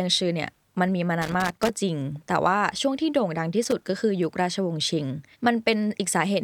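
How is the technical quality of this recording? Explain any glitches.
The recording has two bursts of loose connector crackle. The first runs from 1.22 to 1.69 s. The second is shorter, from 3.63 to 3.81 s. Both come from a worn or dirty contact in the signal path. As it shifts, it rapidly connects and disconnects. That chops the speech into fragments, and any DC on the line turns each break into a pop. The result is an irregular, scratchy crackle over the voice.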